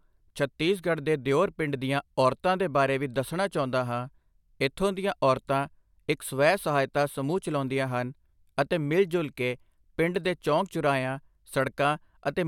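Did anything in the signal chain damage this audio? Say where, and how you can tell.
No, nothing in this speech recording stood out on listening as damage from any stage of the signal chain.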